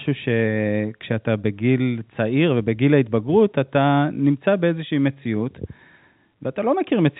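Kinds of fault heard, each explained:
Nothing stood out on listening to this speech beyond the narrow telephone band of the G.711 line, which stops at about 3.9 kHz.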